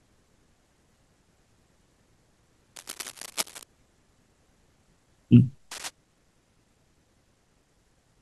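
Cable scratch noise appears from 2.76 to 3.64 s and again from 5.71 to 5.91 s: dense, ragged crackling and rustling over the speech, only a few decibels below it. The likely cause is a worn cable or connector being moved, its contact resistance fluctuating rapidly.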